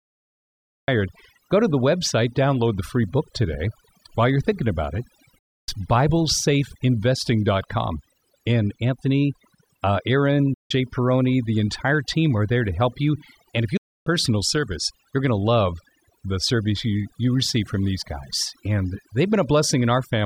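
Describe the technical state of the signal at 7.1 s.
At 7.1 s the speech carries overdone noise removal, present across the whole clip. The reduction is set too aggressively: bands near the estimated noise floor are pulled down or gated off, taking quiet speech detail with them. The background drops and breaks up into twinkling specks. A spectrogram shows scattered isolated dots in the gaps and ragged, patchy harmonics.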